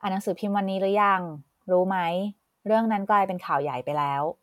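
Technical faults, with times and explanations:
No technical faults can be heard anywhere in this speech recording.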